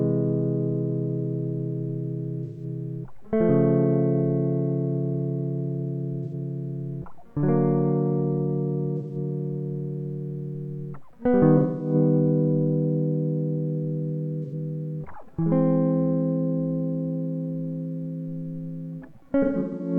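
AAC frame loss with concealment at 2.44, 6.24, 8.97, 11.57, 14.43 and 19.42 s: the decoder refills each lost stretch of 0.09 to 0.30 s from the previous spectrum. The result is a smeared, phasey patch rather than a silent dropout. The final loss is broken up over 0.38 s.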